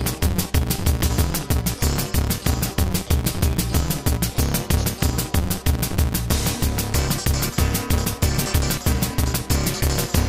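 From the first moment to the end, there's a steady buzz at about 172 Hz riding on everything, and the audio rushes along at roughly 1.88 times its proper speed while the pitch stays about where it should. That's a block size mismatch (truncated): one stage hands over longer blocks than the next reads, which fits a 256-sample read, and each block's tail gets dropped. The buzz is those chop points.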